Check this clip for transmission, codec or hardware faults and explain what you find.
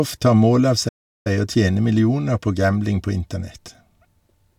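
One fault stands out: a playback stall from 0.88 to 1.27 s. The player likely ran short of data or was blocked, so the speech drops into silence for about 370 ms before it continues.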